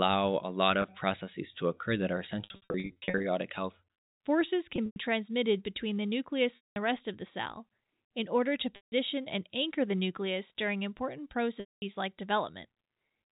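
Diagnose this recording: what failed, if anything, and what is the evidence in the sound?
The network dropped packets, and the receiver concealed the gaps by packet loss with pitch repetition. There are six events: 0.82–0.84 s, a scattered burst from 2.44 to 3.24 s, then 4.76–4.96, 6.56–6.76, 8.76–8.92 and 11.60–11.82 s. The short gaps sound like a held, buzzy tone, and the longer ones fade out before the sound returns. On a spectrogram, frozen harmonic stripes decay to blank. The waveform shows identical repeated cycles tapering off. Gap lengths in 20 ms steps fit 20 ms packets, within the telephone-coded 4 kHz band.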